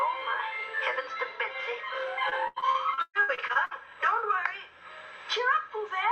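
From 2.29 s to 3.73 s the sound turns choppy and robotic. This is repeated packet loss. Audio kept arriving late or not at all, leaving a run of short holes, about a dozen here. Each hole was filled by stretching the last sound forward. The longest gap lasts 138 ms. Around a third of the stretch is patched rather than real. It comes across as stuttering, with small pieces missing.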